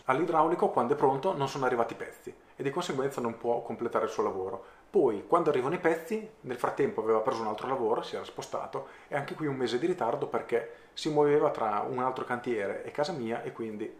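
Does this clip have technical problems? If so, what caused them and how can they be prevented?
No, no technical faults detected.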